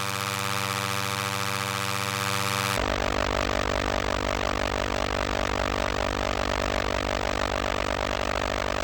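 The clip is a recording of sounds. From 2.77 s to the end, it suffers from stereo read as mono. Interleaved left and right samples are taken in turn as one channel. Each stereo frame becomes two mono samples, so the audio runs at half speed. Pitch falls a full octave, 12 semitones. A mirrored copy of the sound also shows up in the upper half of the spectrum.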